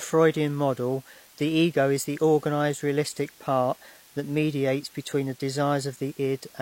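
A steady hiss runs through the whole speech clip, about 25 dB below the voice. It is low bit depth with dither, consistent with 8 bits. Dither turns rounding error into even noise, without distortion.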